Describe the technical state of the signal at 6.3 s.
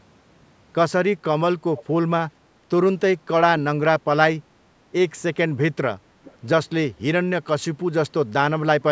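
At 6.3 s there is a brief echo leak, from 6.24 to 6.36 s: a faint copy of the speech returns about 426 ms late, likely leaking past a loudspeaker-side echo canceller. On a spectrogram it shows as a weak repeat of earlier harmonics, capped like everything else at 8 kHz.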